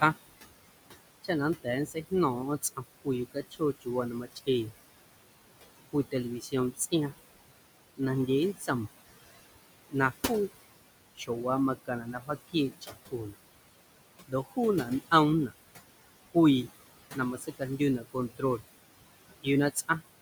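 Noise suppressor artifacts run through the whole recording. The suppressor treats the steady room noise, which sits about 13 dB below the speech, as something to remove, and pulls it down by about 20 dB wherever it judges a band to be noise alone. The background therefore drops away in the gaps and comes back up under each phrase.

Speech cut by the noise suppressor appears in four stretches: 1.24 to 4.72 s, 5.93 to 8.69 s, 9.89 to 13.35 s and 14.28 to 20.03 s. In each, the suppressor misreads quieter parts of the speech as noise and turns them down with the background, by about 18, 15, 21 and 19 dB at the deepest points. The affected moments add up to less than a second per stretch, so soft consonants and trailing sounds come across faint or swallowed.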